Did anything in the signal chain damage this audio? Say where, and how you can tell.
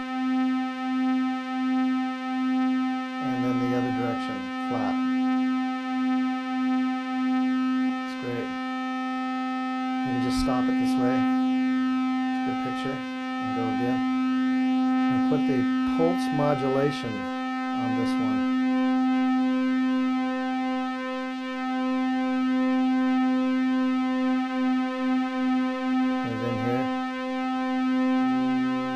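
Yes. At 7.89 s there is a skip ahead: the sound jumps straight forward with no filler and no silence, and something like 0.7 s of audio is simply missing, with the two sides butted together. This happens at the network and jitter-buffer stage. Late audio was discarded while newer audio was already queued. A dropout or concealment gap would leave silence or smeared filler. Here the material just vanishes and the timeline closes up.

Immediately after, from 7.99 s to 9.41 s, the jitter buffer speed-up follows. The sound runs about 9% fast (109%) while its pitch stays put, so it feels rushed rather than higher. The buffer was holding more audio than its target, and the receiver trimmed it back by cutting out many short pitch-period slices, roughly 150 ms in total. A resampling or clock error would shift pitch along with tempo, which doesn't happen here.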